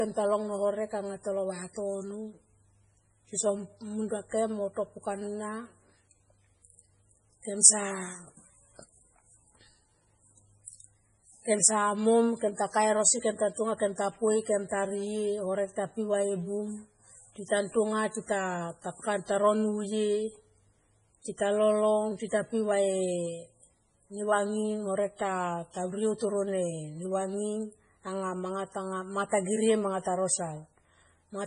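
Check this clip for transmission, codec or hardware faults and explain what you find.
Heavy MP3 compression runs through the whole speech recording, likely from an MP3 encode at a very low bitrate, around 24 kbps. A spectrogram shows nothing above 10.5 kHz and flickering holes where weak frequency lines drop out frame to frame, which gives a watery, swirling sound and smeared consonant attacks.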